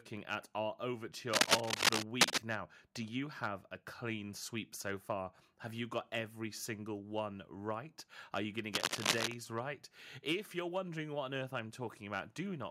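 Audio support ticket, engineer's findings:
Cable scratch noise, speech track. 1.33–2.38 s, after "at our": dense, uneven scratching, roughly 10 dB over the speech. 8.73–9.34 s, after "you going to": same rustle, around 5 dB over. Likely a worn cable or connector being moved, with contact resistance fluctuating fast. Spectrogram: ragged broadband smears over the voice bands. Waveform: jagged, spiky envelope bursts.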